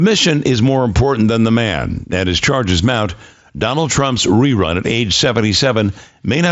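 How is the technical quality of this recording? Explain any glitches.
The speech comes through without glitches over what sounds like a Bluetooth mSBC headset link, with its expected wideband limit leaving nothing above about 7.7 kHz.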